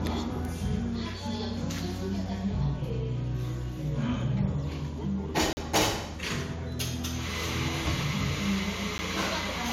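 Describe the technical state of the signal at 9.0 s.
A block of digital silence sits at 8.98 s, where about 10 ms of samples drop to silence and return with no fade. The abrupt edges produce a short tick. The waveform shows a flat line, and the spectrogram a thin blank column flanked by broadband vertical streaks.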